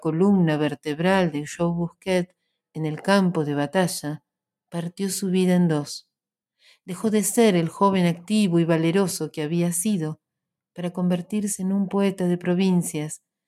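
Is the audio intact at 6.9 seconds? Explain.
Yes, the audio at 6.9 seconds is intact, with no dropout, click, distortion or other fault to be heard at that moment.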